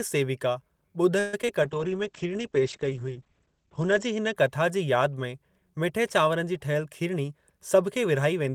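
At 1.19 s the speech hangs on a fading buzz for about 138 ms before carrying on from exactly where it stopped, with nothing lost. This is a call audio freeze: packets were likely delayed in transit, the jitter buffer emptied, and the receiver stretched the last sound until they arrived.

Moments later, a brief smear at 1.42 s and another from 1.46 to 1.48 s come from short concealed packet loss. About 10 ms of audio missed the decoder each time, and the receiver patched each hole by extrapolating the preceding sound before blending back.

From 1.64 s, just before "कथा जी", the speech turns rough and muffled until 4.41 s. This call bitrate drop took the encoder from 32 to 12 kbps, holding the lowest rate for 2.37 s, and the audio bandwidth shrank from 20 kHz to 8 kHz.

After "मिठे चांवरनि जी ठहियल", from 7.08 s to the end, the speech runs about 8% fast at unchanged pitch and sounds hurried. 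In this jitter buffer speed-up, the receiver trimmed pitch-period slices, around a tenth of a second in total, to shed excess buffered delay.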